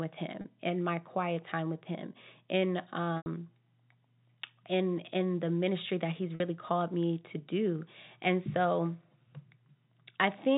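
Packet loss with pitch repetition hits at 0.41, 3.17 and 6.35 s; the receiver loops the last pitch period, so gaps of 30, 90 and 50 ms turn into buzzy holds that fade.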